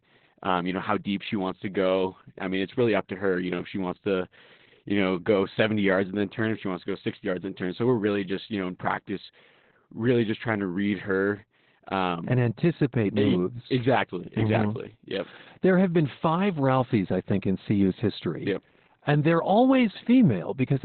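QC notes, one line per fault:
throughout: Opus voice compression. The codec has dropped to its narrowband SILK mode, coding the speech as a linear-prediction model with a coarsely quantised excitation signal in 20 ms frames, and nothing survives above 4.2 kHz. The damage is heavy, consistent with a bitrate around 8 kbps: the speech sounds muffled and boxy, with a hoarse, slightly robotic buzz where the excitation has been coded too roughly to carry natural voicing.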